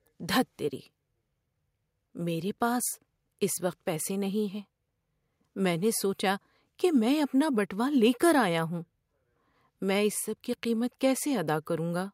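Nothing stood out on listening to this recording of speech.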